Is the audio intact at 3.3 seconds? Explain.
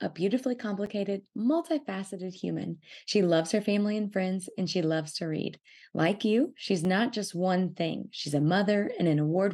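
Yes, the audio is intact at 3.3 seconds, with no fault audible at that moment.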